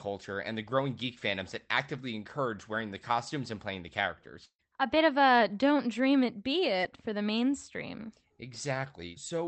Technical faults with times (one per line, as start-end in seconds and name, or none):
4.45-4.61 burst of packet loss
6.81-6.84 short concealed packet loss